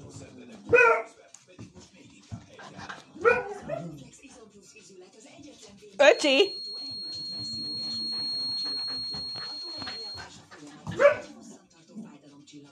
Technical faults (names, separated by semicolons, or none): feedback whistle